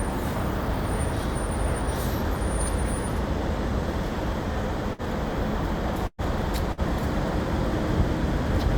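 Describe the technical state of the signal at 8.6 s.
At 8.6 s the signal is intact, with no dropout, clipping, distortion or other fault audible in the sound.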